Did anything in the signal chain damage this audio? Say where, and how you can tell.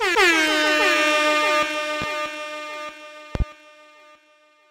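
Yes. A loud pop damages the analogue wiring stage. One pop at 2.02 to 2.06 s peaks about 10 dB above the signal, and a double pop at 3.35 to 3.44 s reaches about 15 dB. The likely cause is a voltage pulse from a plug, switch or static.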